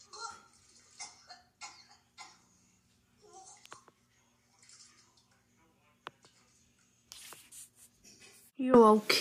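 A single electrical switching spike sits at 3.66 s: one sharp snap laid over the sound, lasting only a millisecond or so and peaking at a modest level of roughly -30 dBFS. It is likely a short arc from a nearby switch, motor or static discharge coupling into the audio line. On a waveform it shows as a thin isolated needle, and on a spectrogram as a narrow vertical stripe running across the full frequency range.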